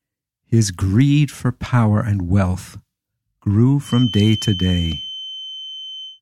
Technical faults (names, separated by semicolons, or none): feedback whistle